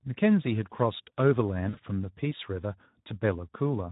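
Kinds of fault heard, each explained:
Speex codec: Speech was coded by Speex at a low rate, consistent with about 11 kbps, which starves the excitation, so the voice sounds plainly noisy and hoarse throughout.
VoIP packet loss concealed by the speech codec: 40 ms of packets went missing and the decoder extrapolated over them, so from 1.69 to 1.79 s speech smears into a fading buzzy tone or coloured noise.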